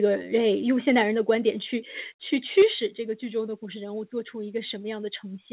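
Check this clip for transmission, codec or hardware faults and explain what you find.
There are two hardware-side faults here, both coming from the microphone input, over a narrowband call path that stops at 4 kHz, which fits G.711 mu-law.

Microphone volume stepped down at 1.02, 2.04 and 2.62 s: the level drops abruptly by about 3, 1 and 5 dB, likely the call software pulling the input gain down.

Microphone overload from 2.58 to 2.62 s: peaks run about 3 dB past the converter's limit and a fair chunk get flattened, adding a harsh crackle. That's likely a too-hot input, and it explains the big gain cut right after.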